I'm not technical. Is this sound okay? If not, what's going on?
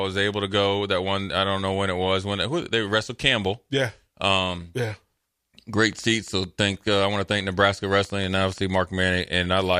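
No. Likely interference or a faulty connection kept injecting pulses, causing a train of clicks: roughly fifteen uneven pops, about five per second, from 5.93 to 8.76 seconds.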